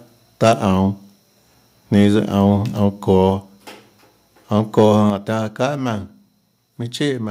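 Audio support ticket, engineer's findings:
Harsh crackling edge on the loudest syllables at 0.45–0.50 s, 1.95–2.01 s and 4.78–4.86 s. Likely microphone overload: input gain too high, peaks driven about 1 to 3 dB past converter full scale, tops flattened. Waveform shows squared-off peaks on a few percent of samples. Spectrogram shows broadband vertical smears.

Sudden level drop in voice and background together at 3.3 s (about 2 dB) and 5.1 s (about 5 dB). This is likely a microphone volume step-down by the call software, which cut device input gain in one move after a hot, clipping input. Waveform shows an abrupt envelope step with no fade. Spectrogram shows uniform darkening across all bands from that instant.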